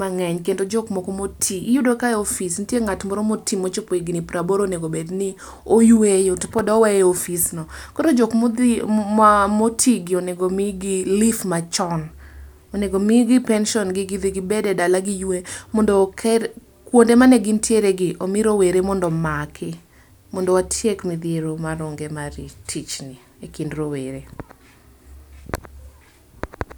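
No technical faults can be heard anywhere in this speech recording; the signal stays steady and intact throughout.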